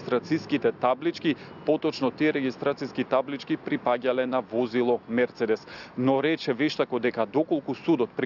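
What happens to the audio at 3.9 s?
Nothing goes wrong at 3.9 s; the audio runs through that moment intact, with no dropout, click, distortion or other fault.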